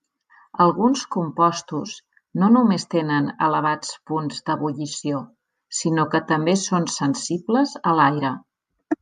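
No technical faults are audible anywhere in this speech recording.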